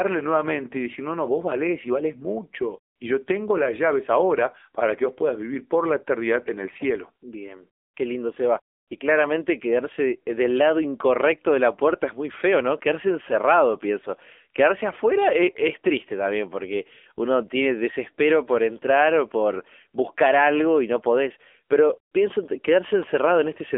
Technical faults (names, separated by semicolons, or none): AMR narrowband mobile codec